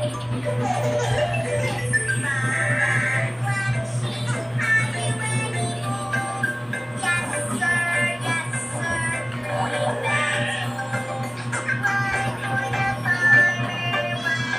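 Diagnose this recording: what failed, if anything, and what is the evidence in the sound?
Nothing failed; no stage shows any audible fault.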